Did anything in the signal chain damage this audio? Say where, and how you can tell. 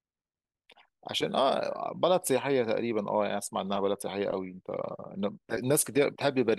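No, nothing in the signal chain audibly damaged this speech recording. At no point in the clip do I hear a disturbance that points to any stage from capture through to playback.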